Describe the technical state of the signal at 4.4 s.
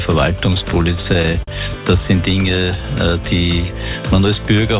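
At 4.4 s the signal is intact, with no dropout, glitch or distortion, just the narrowband character of the call path, whose content stops at 4 kHz in a way that fits a G.711 mu-law telephone codec.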